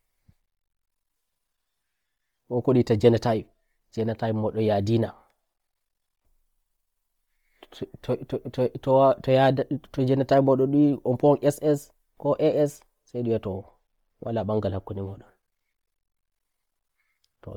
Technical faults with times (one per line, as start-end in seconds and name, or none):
0.00-17.57 Bluetooth LC3 compression